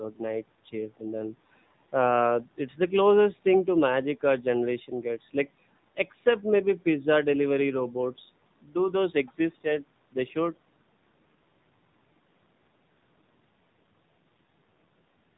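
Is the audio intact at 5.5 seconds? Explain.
No. At 5.5 seconds the speech carries AMR narrowband mobile codec damage, which runs through the entire clip. The codec samples at 8 kHz, so nothing above 4 kHz survives, and it rebuilds the voice from a vocal-tract model excited by a few pulses per 5 ms subframe. The damage is plainly audible, with a buzzy, synthetic, band-limited quality that fits a low mode around 7.4 kbps.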